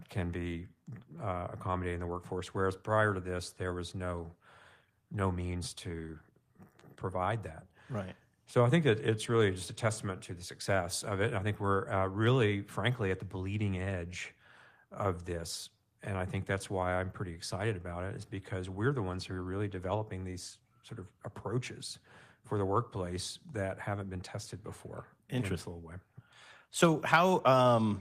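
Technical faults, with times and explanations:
No technical faults can be heard in this speech recording. There is nothing to list with a time or an explanation.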